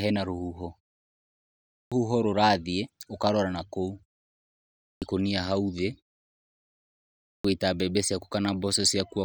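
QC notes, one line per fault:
1.51, 4.61 and 7.04 s, clipped start after a pause: each time the output device drops into a low-power state during the preceding silence (0.79, 0.64 and 1.1 s) and takes roughly 0.41 s to wake and relock once sound resumes. That opening stretch never reaches the output, so speech bursts in abruptly from silence with its first sounds missing. The muted pauses that precede each onset are the expected quiet gaps and are not at fault here.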